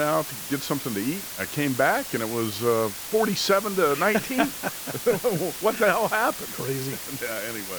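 From start to finish the speech carries low bit depth with dither. The signal has been reduced to about 5 bits, and dither was added before rounding, so the quantisation error is spread into a steady white noise rather than distortion. The result is a constant, even hiss sitting only about 10 dB below the speech. The hiss is unusually loud, but it does not pump or change with the level of the speech.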